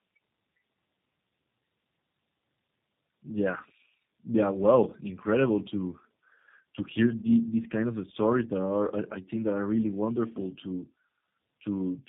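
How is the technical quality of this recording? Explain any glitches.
The technical quality is limited by a single fault that runs through the whole recording.

Tandem speech coding affects the speech from start to finish. The call appears to have crossed two low-rate speech codecs in a row, decoded and re-encoded at the border, so the second coder had to model audio already roughened by the first. Nothing reaches above about 3.8 kHz, which fits narrowband telephony, possibly AMR-NB followed by G.729A. The compounded errors make the speech muffled, grainy and warbly.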